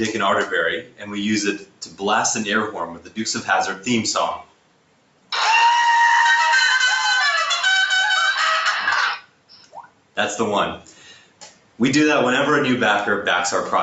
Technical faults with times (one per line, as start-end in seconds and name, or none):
0.00-13.82 noise suppressor applied to music or sounds
0.81-1.14 sound cut by the noise suppressor
1.58-2.02 sound cut by the noise suppressor
2.94-3.18 sound cut by the noise suppressor
4.43-5.31 sound cut by the noise suppressor
9.18-10.17 sound cut by the noise suppressor
10.81-11.79 sound cut by the noise suppressor